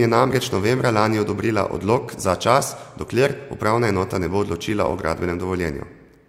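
No technical faults can be heard anywhere here.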